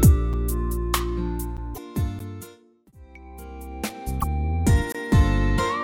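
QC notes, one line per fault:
QC notes, one line per fault:
0.33 s, 1.57 s, 2.19 s, 4.92–4.95 s: block of digital silence. The output drops out abruptly for about 6 ms, 12 ms, 12 ms and 23 ms, which fits buffers, the last three of 512 and 1024 samples, not being filled in time. On the waveform these show as flat gaps, and on the spectrogram as vertical broadband lines at each edge.
1.71–1.78 s, 4.17–4.24 s: damaged data in a compressed stream. Each 70 ms span is a brief chirp, squawk, click or short hole where the decoder misreads corrupted frames, loses sync, and resyncs at the next header. On the spectrogram it appears as a smeared, blocky burst out of character with the surrounding sound.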